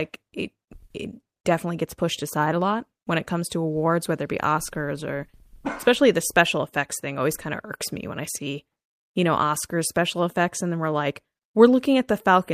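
No technical faults can be heard anywhere in this speech recording. Nothing in the audio breaks, drops out or glitches at any point.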